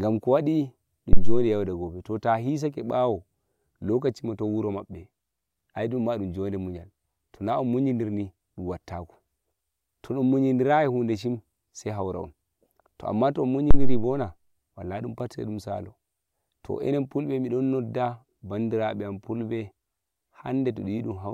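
A speech recording with two phantom power thumps, at 1.13 to 1.52 s and 13.71 to 14.13 s. Switching supply voltage on a live input sends a step through the coupling capacitors. The result is a deep thump peaking near about -3 dBFS and decaying in roughly 90 ms. On the waveform it shows as a large one-sided swing, and on the spectrogram as a dark low-frequency blot.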